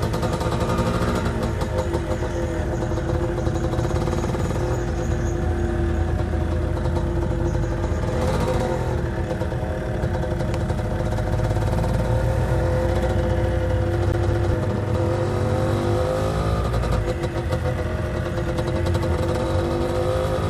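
CD stuck on one turn, from 14.12 to 14.54 s: the laser is knocked back a track at the same spot on successive rotations, so a 208 ms slice of sound repeats twice, each pass broken by a brief mute, giving a quick, even skipping stutter.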